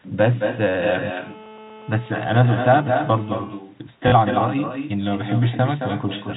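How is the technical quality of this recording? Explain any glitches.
The quality is poor, with three distinct faults over narrowband telephone speech that stops at 4 kHz.

Echo with no canceller runs throughout: the far end's loudspeaker feeds its microphone and nothing removes it, so every phrase returns about a fifth of a second later, roughly 8 dB quieter and thinner.

GSM phone buzz from 1.06 to 3.35 s: a nearby 2G phone on a call pulses at 217 Hz, which the audio circuit rectifies into a steady, raspy buzz about 23 dB below the speech.

Packet loss with last packet repeated from 4.08 to 4.12 s: 40 ms of audio went missing, fitting two lost 20 ms packets, and replaying the last packet makes a robotic stutter.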